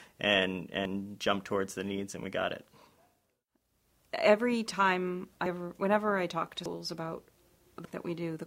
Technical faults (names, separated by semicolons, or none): dropped buffer (overrun)